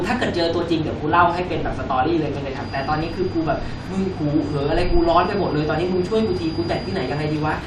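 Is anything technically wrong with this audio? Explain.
Yes. From 2.54 s to the end, the loudspeaker-to-microphone loop is likely held at the edge of instability, producing a feedback whistle: a thin, steady 4.8 kHz tone about 25 dB beneath the speech, swelling and fading slowly in level.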